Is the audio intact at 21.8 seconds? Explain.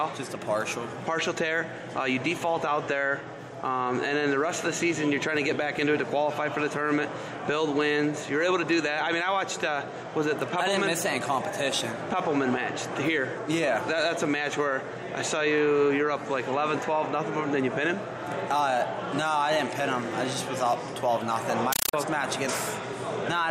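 No. From 21.73 to 21.93 s a compressed stream is played as audio: undecoded Dolby Digital data taken as samples. Loud static arrives in 8 ms bursts, 31.25 times a second. That steady chattering rhythm separates it from random digital noise or clipping.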